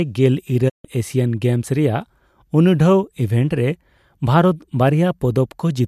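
At 0.68 s the speech fades out over about 20 ms and stays silent until 0.86 s: a digital broadcast dropout, where the receiver muted after losing several frames.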